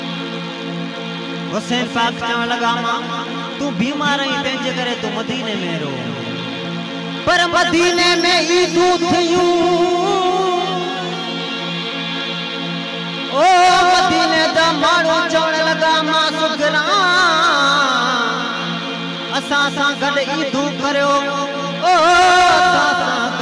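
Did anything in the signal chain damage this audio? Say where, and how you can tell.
No, nothing along the chain from capture to playback has left any audible damage on this sound.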